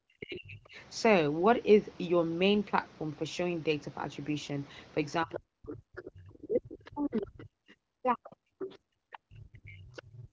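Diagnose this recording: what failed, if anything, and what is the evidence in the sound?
The call's echo canceller, at the call-processing stage, likely mistook double talk for echo and attenuated the near-end talker. The speech drops by roughly 40 dB, dulling and breaking up from 0 to 0.76 s and again from 5.24 s to the end.

That same echo canceller is the likely cause of the other side's voice leaking through. Loudspeaker pickup escapes cancellation at 5.34 to 5.39, 5.70 to 6.03, 6.58 to 7.21, 8.24 to 8.76 and 9.97 to 10.02 s. These are scraps about 15 to 25 dB below the talker.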